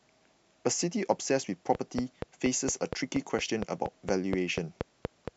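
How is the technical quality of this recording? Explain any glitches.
The recording is marred by one clear technical fault, a train of clicks over most of the clip. From 1.75 s to 5.29 s a regular ticking runs over the speech at about 4.25 clicks per second, roughly fifteen pulses in all, peaking about 15 dB above the signal. The likely cause is electrical interference from nearby equipment or a faulty connection or power supply injecting repeated pulses. Unlike random crackle or isolated dropout pops, these clicks share one shape, keep a steady pace, and continue through the pauses.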